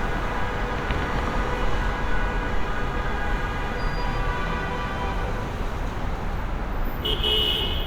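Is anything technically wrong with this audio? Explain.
No, nothing technically wrong can be heard here.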